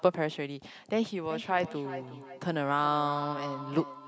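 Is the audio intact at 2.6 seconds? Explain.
No. At 2.6 s the speech is caught in a feedback echo between two devices, running from 1.3 s to the end of the clip at 4.08 s. A second device in the room replays the call audio, the first microphone picks it up again, and its echo canceller cannot remove sound it did not play itself. Each phrase returns roughly every 0.4 s, thinner and more ringing, peaking at about 11 dB below the speech.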